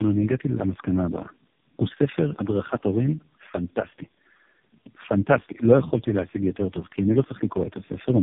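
Tandem speech coding runs through the whole clip. The speech sounds as if it passed through three narrowband mobile-style codecs in a row, with each new coder working from the previous one's already damaged output. The errors stack up: the voice turns rough, muffled and warbly, worse than a single low-rate link would leave it. The roughest stage suggests a rate as low as about 4.75 kbit/s, and nothing is left above 3.7 kHz.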